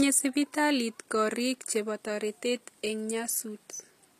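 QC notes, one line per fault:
Throughout, HE-AAC compression: the speech has plainly audible codec damage, with s sounds turning gritty, metallic and lispy and the treble synthetic. Nothing is present above 14.9 kHz. The likely cause is HE-AAC coding at a low rate, which fits roughly 24 kbps. The coder keeps only the lower spectrum and rebuilds the top by copying lower bands upward under a coarse envelope, so the upper harmonics no longer line up with the real ones.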